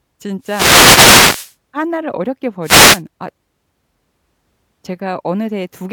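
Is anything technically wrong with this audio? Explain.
Yes. Wireless microphone noise hits occur from 0.41 to 1.55 s and again from 2.62 to 3.02 s. The analogue FM radio link from the microphone fades when reflected copies of its signal arrive out of step and cancel at the receiver. As the carrier weakens, receiver noise comes up. The first hit is a longer burst of noise lasting over a second. The second is brief.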